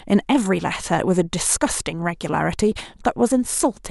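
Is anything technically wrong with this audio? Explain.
No, no technical faults present.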